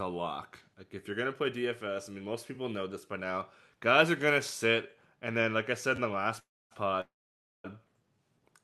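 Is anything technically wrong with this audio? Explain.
Yes. From 5.96 to 5.98 s there is a repeated buffer: fresh audio arrived late, so a 10.67 ms block, which fits a 512-sample buffer, played twice more, heard as a brief clicky stutter.

At 6.39 to 6.73 s and 7.01 to 7.66 s there are call audio freezes, likely from held-up packets draining the jitter buffer. Each is a short fading buzz or hiss, then silence of about 270 ms and 560 ms. The audio then resumes where it stopped with nothing missing, so 313 ms and 634 ms of gap are added.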